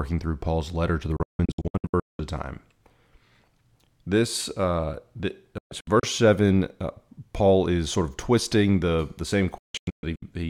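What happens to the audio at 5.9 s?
A digital broadcast dropout runs from 5.58 to 6.04 s, after "uh the". Failed frames mute the receiver, leaving short silent holes, longest 128 ms.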